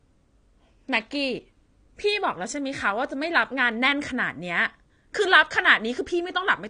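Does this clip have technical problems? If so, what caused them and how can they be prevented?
Yes. AAC compression damage runs throughout this speech: nothing above 9.6 kHz, with dull, smeared, warbly sibilants, likely from AAC-LC at a low bitrate consistent with 32 kbps. Prevent it by encoding at a higher bitrate.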